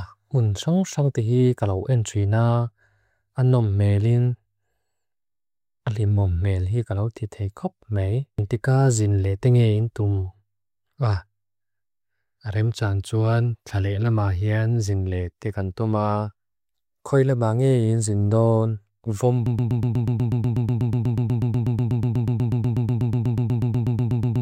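Speech recording that falls into a broken-record loop at 19.46 s: a fragment of about 0.12 s repeats exactly, back to back, 41 times until the clip ends. The likely cause is a stalled player or stream resending its last buffered fragment, so the audio from that point on is lost.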